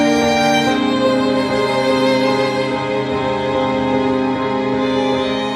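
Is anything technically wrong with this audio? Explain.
No, nothing technically wrong with this music recording.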